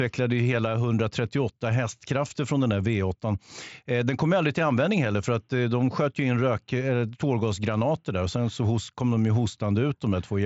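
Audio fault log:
Nothing to log here, just speech coming over a Bluetooth mSBC headset link, with the top end stopping around 7.7 kHz as you'd expect from that codec.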